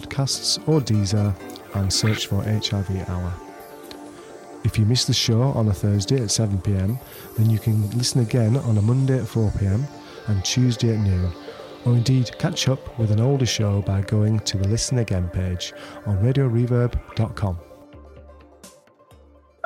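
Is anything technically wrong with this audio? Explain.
Yes. Periodic USB or driver dropouts occur from 1.91 to 17.82 s: the audio path stalls every 1.99 s, skipping about 10 ms each time and leaving evenly spaced ticks.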